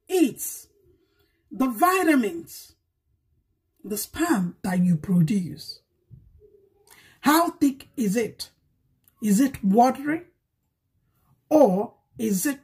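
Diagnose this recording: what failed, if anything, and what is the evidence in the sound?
For the first 4.25 s or so, the sound goes hollow and phasey, like it's playing down a tube. That's classic channel delay comb filtering: one side is running roughly 3 ms behind the other, and when the two get folded to mono, whatever they share cancels at evenly spaced frequencies, with the first notch down around 150 Hz. I'd look at the driver or buffer stage, where one channel picked up a short offset before the mono sum.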